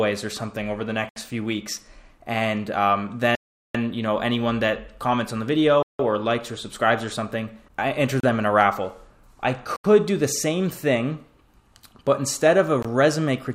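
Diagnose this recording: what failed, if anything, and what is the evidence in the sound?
Bluetooth stall, six dropouts to silence at 1.09–1.16, 3.35–3.75, 5.83–5.99, 8.20–8.24, 9.76–9.85 and 12.83–12.85 s, lasting 21 to 393 ms, with the sound resuming after each. At the wireless playback link, interference likely delayed packets until the receiver's buffer emptied.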